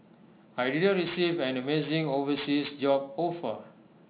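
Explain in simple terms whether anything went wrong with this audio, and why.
Something went wrong throughout the whole clip: aliasing. The speech sounds gritty and metallic, especially on hiss sounds like s. It seems the sound was squeezed into a lower quality without first removing high sounds. Those folded back below about 4 kHz as false, unrelated tones.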